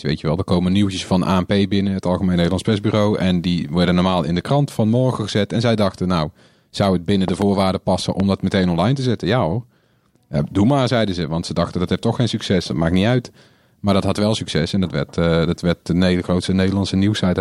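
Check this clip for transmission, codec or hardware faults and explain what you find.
Two loud pops: a double one at 7.28–7.44 s after "nou zou het binnen", a single one at 8.20–8.22 s before "dat meteen online te", each about 10 dB above the speech. A voltage step, likely static or a switch, thumps over continuing speech as sharp waveform spikes and thin broadband spectrogram lines.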